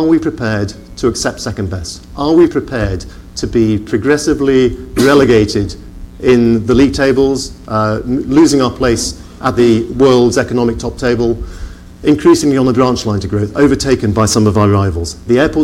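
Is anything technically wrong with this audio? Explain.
Yes. Mains buzz runs through the whole clip. Switching spikes, twice in every 60 Hz cycle, leak in, adding harmonics up to several kHz. It sounds like a steady, raspy buzz sitting well below the sound.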